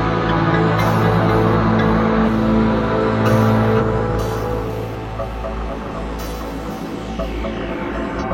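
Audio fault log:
2.23–2.28 s, 3.77–3.82 s and 8.18–8.23 s: damaged data in a compressed stream. Corrupted frames make the decoder misread and lose sync until the next frame header, causing brief glitches.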